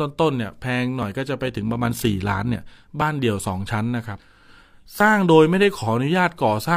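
Speech runs through this clip, broken by two kinds of fault. The first is overlap between stream segments: short skips at 1.03 to 1.07 s, 3.02 to 3.05 s and 5.00 to 5.04 s, each removing roughly 30 to 40 ms. They fall almost exactly 2 s apart, matching a 2 s segment length, where the player trims a supposed duplicate that was never actually repeated. Unlike a dropout, no silence is inserted. The waveform simply jumps ahead, so each one is a tiny skip rather than a gap. The second is overlap-add ripple from 1.45 to 2.63 s, a level rise and fall of about 6 dB at around 50 Hz, one cycle per frame, because the overlapping windows don't sum to a steady gain. It sets itself apart from codec warbling by being a regular, buzzy tremolo in loudness across the whole band, heard as a rough robotic flutter over the voice.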